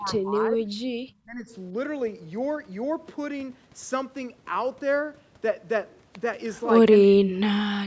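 Speech, heard through call microphone processing with nothing above 8 kHz, drops out in three places. From 0 to 0.76 s and from 1.24 to 1.51 s, the level dips by about 20 dB in patches. From 7.1 s to the end, it falls by about 40 dB for most of that stretch. The likely cause is speech suppressed in double talk: the echo canceller mistook this talker for loudspeaker echo while the far side spoke, and turned both down.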